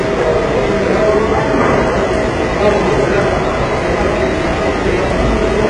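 An everyday sound recording with heavy compression damage throughout. Nothing reaches above about 10.9 kHz. The treble that remains sounds synthetic, gritty and metallic, with harmonics that don't line up. This is likely HE-AAC compression rebuilding the top end from copied lower bands, which fits a very low bitrate near 12 kbps.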